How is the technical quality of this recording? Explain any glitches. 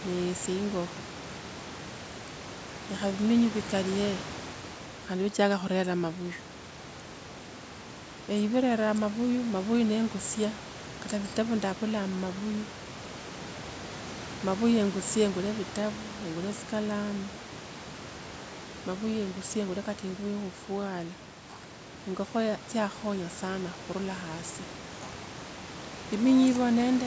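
No glitches can be heard in this speech recording. It has passed through a call's microphone processing, which leaves nothing above 8 kHz, and there is room noise in the background sitting about 16 dB below the speech.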